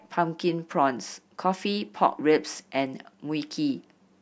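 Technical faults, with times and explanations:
No technical faults can be heard; the speech signal comes through without any dropout, distortion or other defect in playback.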